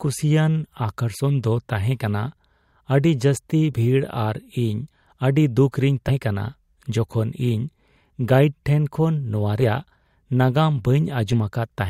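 Compressed frames are skipped six times in this speech: at 1.19–1.22 s, 3.72–3.75 s, 4.91 s, 6.08–6.11 s, 9.61 s and 11.32–11.37 s. Whole frames never reach the output, so the speech lurches forward by roughly 20 to 150 ms each time, the longest jump near 4.91 s. The jumps fit a 10 ms frame length.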